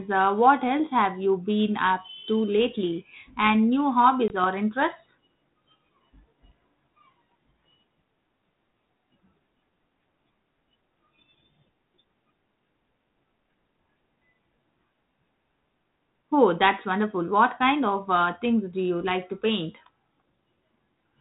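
At 4.28 to 4.31 s, just before "or interests", there is packet loss on an ADPCM call: about 20 ms of audio, roughly one packet, drops out and is filled with silence. Because the decoder's adaptive predictor and step size lose track of the sender's, the sound comes back with brief distortion before settling. On a waveform this is a flat, hard-edged gap; a spectrogram shows a clean vertical blank band, with the band-limited ADPCM texture resuming after it.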